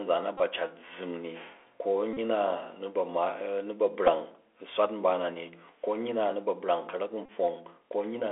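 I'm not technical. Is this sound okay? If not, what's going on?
No, the speech has two problems, both typical of a Bluetooth headset.

The first runs through the whole clip: the Bluetooth CVSD headset codec, the basic audio format headsets use for calls. It keeps only a narrow slice of sound, roughly 300 Hz to 3.4 kHz, so the voice sounds thin and phone-like. Unlike a plain phone line, it also leaves a fine, grainy hiss under the speech and makes s sounds scratchy, and loud, bright moments break up.

The second is the Bluetooth headset packet repeated fault. Small chunks of audio were lost between headset and phone, and the headset replayed the last chunk over and over. It happens at 0.38–0.41 s, 2.13–2.18 s, 4.07–4.09 s and 7.26–7.29 s. Each repeat lasts 3.75 ms, so instead of a silent gap you hear a short buzz near 267 Hz. The one at 4.07 s is briefest.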